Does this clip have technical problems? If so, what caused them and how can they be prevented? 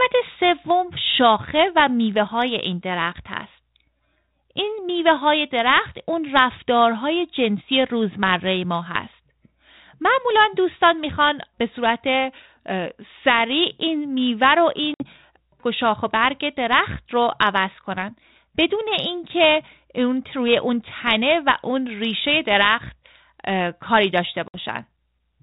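Yes. Packet loss on an ADPCM call cuts two hard-edged silent holes, at 14.94–15.06 s and 24.48–24.59 s, each a loss of about 60 ms, a few packets' worth. Unlike a plain dropout that resumes cleanly, the speech after each gap returns with brief, slight distortion, because the G.726 decoder's predictor and step size have drifted from the sender's. That band-limited telephone sound fits 32 kbit/s ADPCM. Prevent it with a jitter buffer, packet-loss concealment and a decoder state reset after lost packets.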